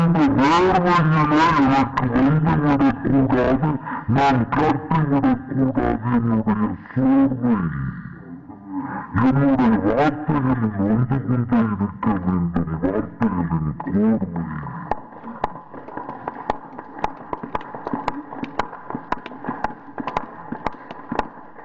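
From the first moment to the last, the whole clip suffers from a wrong sample rate. Everything runs at half speed and sits a full octave low, 12 semitones down, because speed and pitch have shifted together by the same factor of 0.5. That fits 48 kHz material being played back at 24 kHz with no conversion. You get a slow, heavy, dragged-out sound where every event takes twice as long as it should.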